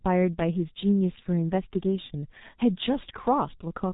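From start to finish the speech carries the sound of the G.723.1 codec, heavily damaged. Nothing reaches above 3.8 kHz, so it is muffled, and the coarse, slowly updated voice model leaves a hoarse, rough texture with smeared consonants, which fits a bitrate around 6 kbit/s. A simple low-pass filter would dull the top end but keep the voice smooth and the consonants clean. Here the roughness and blurring show the codec's coding itself.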